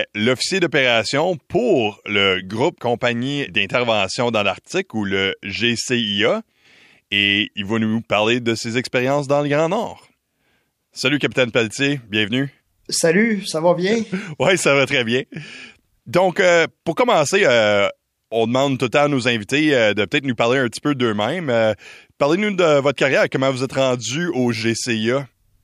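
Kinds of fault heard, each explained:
No kinds of fault are heard in this speech.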